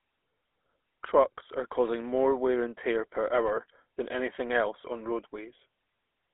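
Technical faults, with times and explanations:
Throughout, GSM full-rate codec: the speech passed through a vocal-tract model driven by sparse, evenly spaced pulses, consistent with 13 kbps GSM coding. This gives a plainly audible buzzy, gravelly roughness within a 300 Hz to 3.5 kHz band, with nothing above 3.8 kHz.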